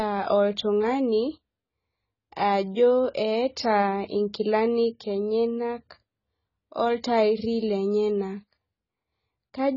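AAC compression runs throughout, likely from a heavily starved encoder, fitting roughly 16 kbps. Nothing survives above 7 kHz, so speech sounds dull, and sibilants smear into fizzy warbling.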